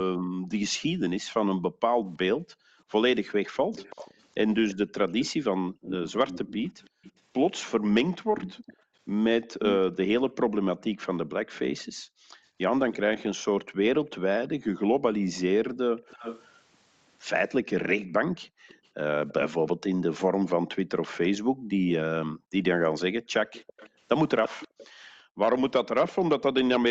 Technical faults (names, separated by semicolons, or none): background gated by the echo canceller; echo leak